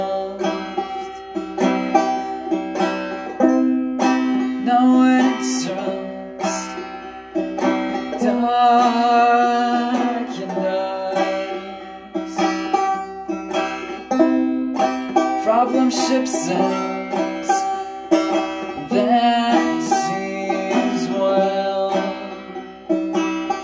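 No technical faults are audible.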